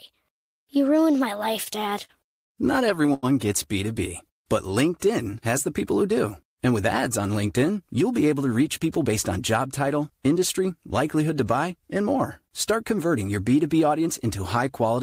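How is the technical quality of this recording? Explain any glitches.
The speech has network playback glitches in its first few seconds. Repeated stalls (stutter) run from 1.63 to 2.53 s: packets arrived too slowly, so the jitter buffer emptied six times and the receiver held and faded sound, giving a dragging, halting delivery over about 150 ms, with the longest gap 58 ms. Short stalls from a late packet occur at 3.06–3.10 s and 3.14–3.25 s: a packet arrived late, so the last sound was stretched by 21 ms and then 88 ms, giving a briefly held sound with a slight buzz or dip before playback resumed where it left off.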